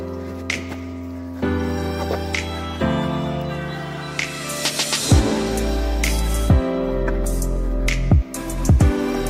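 No faults detected anywhere in the recording.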